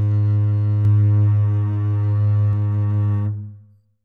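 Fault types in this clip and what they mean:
Doubled audio track: from 0.85 s to 2.53 s the music is heard twice, a full-band copy trailing by about half a second and around 5 dB quieter than the original. Unlike an echo or room reflection, the copy has no decay tail, no repeated fading returns and no added room colour, and it switches on and off abruptly. The likely cause is a second capture through a slower path, or an edit leaving two misaligned copies.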